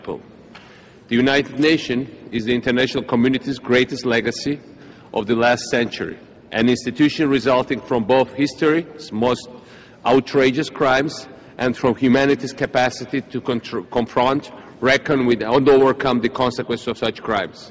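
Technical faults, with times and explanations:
Nothing here sounds wrong, just the ordinary sound of a call line, where the top end stops at around 8 kHz, as you'd expect from that kind of connection.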